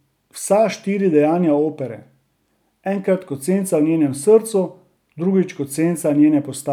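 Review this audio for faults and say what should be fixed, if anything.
No faults; nothing needs fixing.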